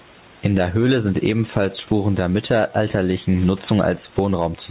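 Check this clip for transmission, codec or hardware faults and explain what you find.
One fault runs through the whole clip: gain pumping. Throughout, the gain swings by around 10 dB, pulled down under each louder passage, likely from input gain set too high with a fast limiter clamping every peak. Unlike a noise gate, the pumping pulls the level down rather than cutting it out. The dull, narrow top end comes from the G.711 call path stopping at 4 kHz, not from the pumping.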